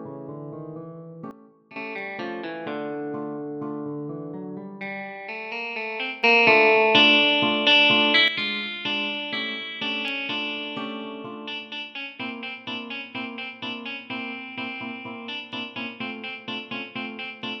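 A gain stage likely switched between settings without a ramp, producing a sudden gain jump twice. From 1.31 to 1.76 s the level drops by about 12 dB, and from 6.23 to 8.28 s it rises by about 10 dB, with background noise stepping together with the sound.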